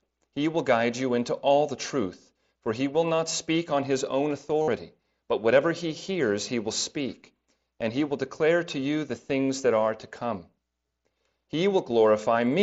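At 3.16 to 3.19 s and again at 4.62 to 4.68 s, the speech shows concealed Bluetooth headset packet loss. Headset packets never arrived, so the receiver filled roughly 30 ms and then 52 ms by repeating the closest-matching recent stretch of waveform. Each gap sounds like a short buzzy hold at full level with a slight warble as real speech resumes. On a waveform it looks like a periodic copied cycle. A spectrogram shows flat harmonic bands cut off inside the mSBC codec's 8 kHz limit.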